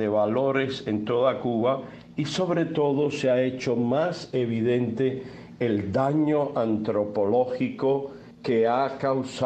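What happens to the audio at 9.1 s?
Nothing goes wrong at 9.1 s; the audio plays through that moment intact, with no dropout, click or distortion.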